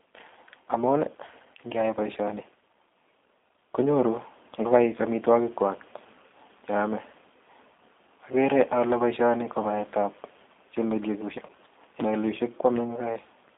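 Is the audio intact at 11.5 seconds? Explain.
No. From 11.46 to 11.51 s, VoIP packet loss concealed by the speech codec covers a gap of about 30 ms. The decoder extends its last pitch and filter with falling gain, so the sound turns into a short, fading buzzy tone or coloured noise. The whole clip also carries plainly audible G.729 codec damage, which fits an 8 kbit/s stream. The band is limited to 250 Hz–3.7 kHz, and the speech sounds rough and synthetic.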